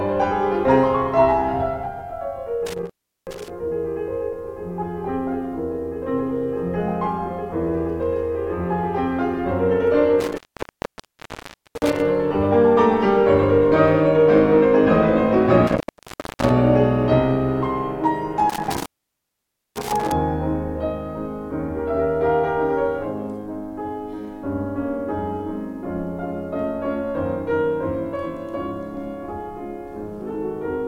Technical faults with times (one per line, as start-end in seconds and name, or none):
2.66-3.50 intermittent contact
10.20-12.00 intermittent contact
15.67-16.51 intermittent contact
18.50-20.12 intermittent contact